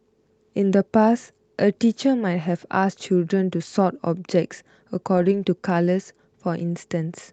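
Speech clip with a lost packet rebuilt from error correction at 5.17–5.43 s: low-bitrate copies fill about 140 ms, showing as a rougher, noisier smear on the spectrogram rather than a waveform gap.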